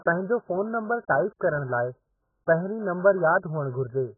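A heavily starved perceptual codec, likely AAC compression of the AAC-LC kind, has been applied to this short speech clip from start to finish, at a data rate that points to roughly 8 kbps. With so few bits per frame, the encoder discards everything above about 1.8 kHz and quantises what remains coarsely. The speech therefore sounds dull and muffled throughout, with smeared, warbling texture on sustained sounds and fizzy, broken sibilants.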